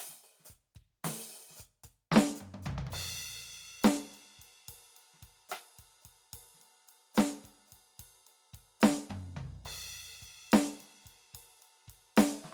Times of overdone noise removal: none

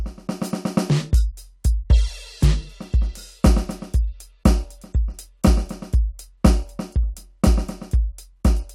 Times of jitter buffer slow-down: none

